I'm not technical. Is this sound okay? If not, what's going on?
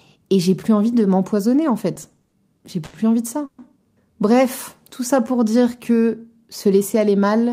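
No. From 1.95 to 2.95 s there are repeated stalls (stutter): the sound catches eight times, each under a tenth of a second. Data arrived late, so the playback ran dry and stretched the last sound until more came. Nothing is lost, but it drags.

Then a call audio freeze at 3.45 to 3.60 s: the sound hangs for about 130 ms, filled with held-over sound rather than silence. The likely cause is data being held up on the way. It then resumes where it stopped, slightly later.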